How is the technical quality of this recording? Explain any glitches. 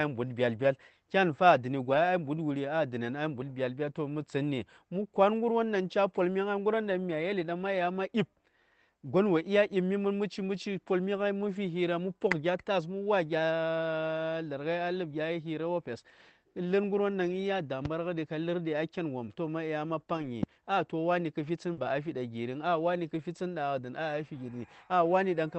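The recording has several short network dropouts and two pops, all carried through an Opus call path whose audio stops at about 8 kHz.

Lost packet rebuilt from error correction, at 0.59, 1.93, 13.37, 20.13 and 21.77 s: packets went missing, and the following packets carried low-bitrate backup copies that the decoder played instead. There is no gap, but each patch, 20 to 80 ms long (longest at 20.13 s), sounds briefly rougher and noisier.

Loud pop, at 17.85 and 20.43 s: a sudden voltage step or pulse, likely from a plug, switch, static discharge or driver glitch, was added to the signal. Each is a single sharp pop, about 10 dB and 15 dB above the surrounding level, with the sound continuing underneath.

Short concealed packet loss, at 21.73 s: 40 ms of audio arrived too late, so the receiver extended the preceding sound to fill the hole and then blended back in. It overlaps the rebuilt stretch just after it, giving a brief smear or wobble.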